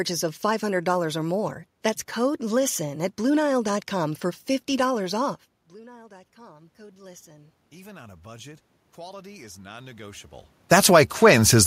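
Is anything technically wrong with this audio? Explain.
Yes. Automatic gain rising runs from 5.74 to 10.31 s. Just before it, the talker moves away from the microphone, and the input drops by about 24 dB. The gain control registers the quieter signal and raises its gain gradually over those four and a half seconds, adding about 10 dB. The voice and the room noise swell together, but the level recovers only part of the loss before the talker moves again at around 10.5 s.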